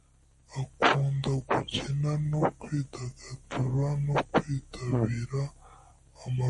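Speech plays throughout at 0.667 times normal speed and about 7 semitones low, a wrong sample rate consistent with 48 kHz audio played at 32 kHz. Unlike a pitch shift alone, pitch and speed fall together.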